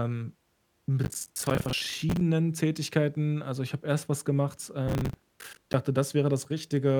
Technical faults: processor overload crackle

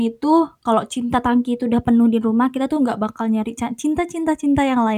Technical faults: drift correction step

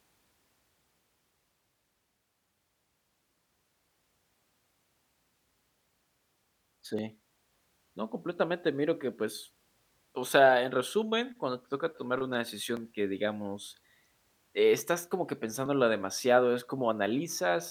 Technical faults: clock drift buffer slips

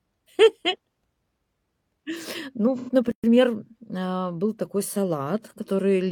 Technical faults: AAC frame loss with concealment; playback stall; time-compressed catch-up

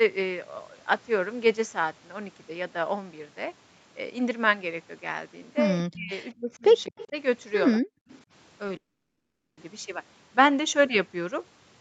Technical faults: speech suppressed in double talk; echo leak; call audio freeze

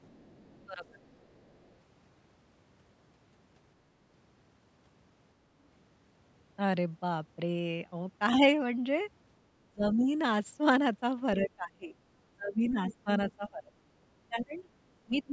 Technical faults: other side's voice leaking through; speech suppressed in double talk

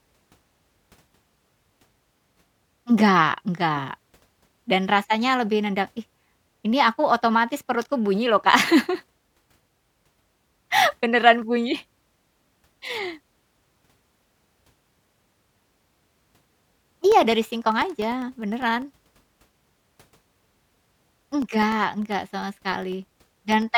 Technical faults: periodic USB or driver dropouts

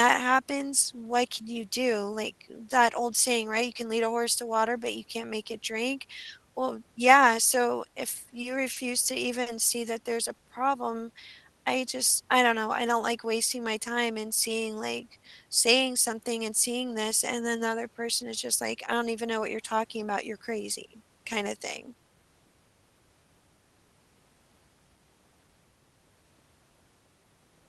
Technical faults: short stall from a late packet; jitter buffer speed-up

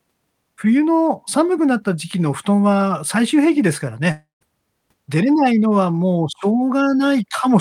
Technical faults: long network dropout

